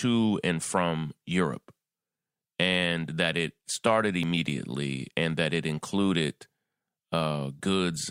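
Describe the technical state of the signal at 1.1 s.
At 1.1 s the signal is intact, with no audible fault at that moment.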